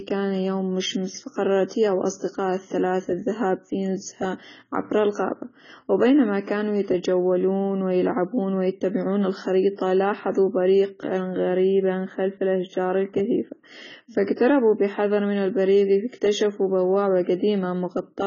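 Throughout the speech, heavy codec damage leaves it dull and smeared with nothing above 7 kHz, likely low-bitrate AAC compression around 16 kbps, not a simple lowpass.

From 11.37 to 13.64 s, channel delay (comb filtering) from summing a channel late by roughly 0.1 ms gives a hollow, phasey colour with fixed notches, the first near 5 kHz.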